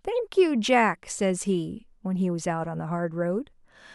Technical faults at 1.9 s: none

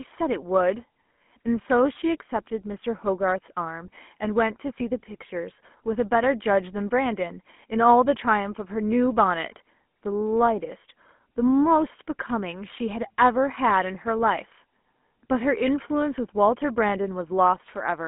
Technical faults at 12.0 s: GSM full-rate codec

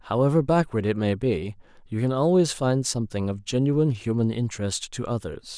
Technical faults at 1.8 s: none

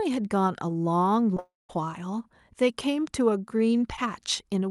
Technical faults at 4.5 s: none

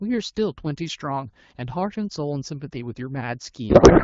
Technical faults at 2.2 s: none

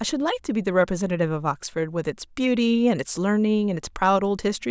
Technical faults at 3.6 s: none

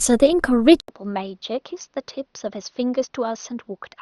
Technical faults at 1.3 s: input switched to a poorer device

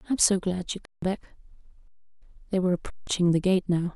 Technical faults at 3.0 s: underrun with held sample

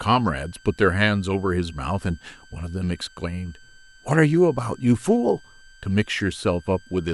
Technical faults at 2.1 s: switching supply whistle

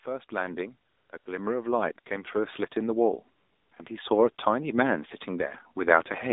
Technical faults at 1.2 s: AMR narrowband mobile codec; automatic gain rising; AMR comfort noise

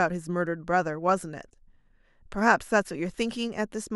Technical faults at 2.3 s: none

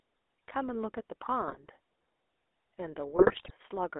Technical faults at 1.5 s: GSM full-rate codec; GSM bit errors

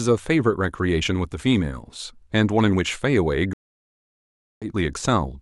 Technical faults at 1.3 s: none

